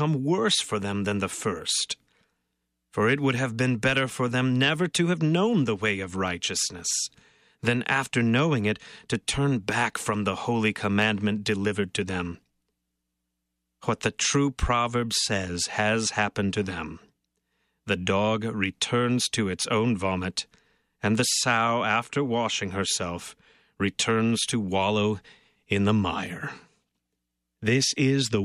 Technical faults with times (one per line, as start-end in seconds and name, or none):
0.10-28.41 clock slip clicks